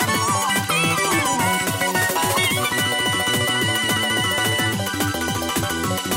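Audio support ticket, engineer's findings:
Audio read two samples at a time (double speed), full clip. Decoder or reader treating sample pairs as single frames, likely a channel-count or sample-width mismatch. Playback runs 2x fast, pitch up 12 semitones (one octave).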